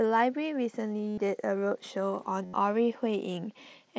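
Concealed Bluetooth headset packet loss at 1.09–1.18 s and 2.45–2.53 s in speech carried over mSBC: lost packets were filled by repeating recent waveform, giving a held buzzy tone that warbles as real sound returns.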